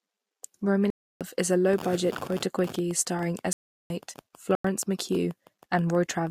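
Speech with three blocks of digital silence: at 0.90 to 1.21 s, just before "is a", at 3.53 to 3.90 s after "quota quickie starring", and at 4.55 to 4.64 s. Each drops to silence without any fade, unlike a dropout that decays or a muted fade. Gaps of about 306, 372 and 93 ms point to an output buffer not filled in time.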